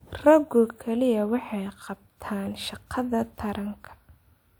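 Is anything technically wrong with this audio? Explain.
No, no technical faults.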